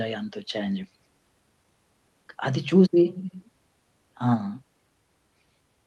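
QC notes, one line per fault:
0.83–0.98 s, skip ahead: roughly 400 ms of speech was dropped in transit or by the jitter buffer, so playback jumps forward and joins the two sides almost directly.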